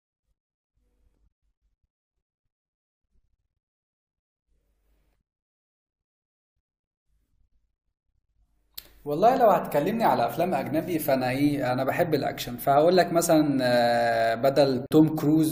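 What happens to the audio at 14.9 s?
At 14.86 s the speech drops into a gap at a join of encoded pieces, a silence of about 48 ms lasting until 14.91 s. Two separately encoded segments were butted together untrimmed, so encoder start-up delay and final-frame padding remain. The edges are smeared by the codec, and the speech resumes where it stopped.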